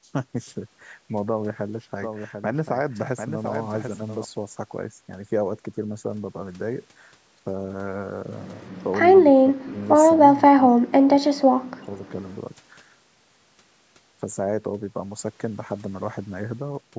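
From 2.02 to 4.24 s the speech carries a doubled audio track: a second, full-band copy trails the original by about 0.7 s at roughly 5 dB lower. It has no reverberant tail or room colouring, so it reads as a clean echo of the same speech, and it starts and stops abruptly at those edges. The likely cause is the signal being captured a second time through a slower path and mixed back in.

Later, the speech is suppressed in double talk, in two stretches. From 9.27 to 9.81 s the level falls by around 30 dB over about half a second. From 10.35 to 12.05 s it dips harder, by around 40 dB, for roughly a second in total. This likely comes from an echo canceller that could not tell the talker apart from far-end loudspeaker echo while both sides spoke, and so attenuated everything. The band-limiting to 8 kHz from the call microphone processing is expected and separate from these faults.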